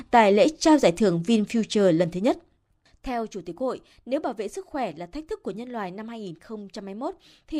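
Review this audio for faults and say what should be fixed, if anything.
Zipper noise runs from 1.86 to 3.15 s as the speech level drops by roughly 15 dB. The gain moves in around a hundred unsmoothed steps a second, which points to a once-per-buffer update, and each step adds a click, producing a fine ticking. To prevent it, interpolate the gain per sample or ramp it across each buffer.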